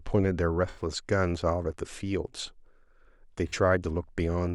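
Speech with two dropouts from AAC frame loss with concealment: at 0.69 to 0.81 s, about 85 ms, and at 3.48 to 3.54 s, about 43 ms. The decoder rebuilds each gap from the last good spectrum, leaving brief smeared, noisy patches that fit four and two lost frames.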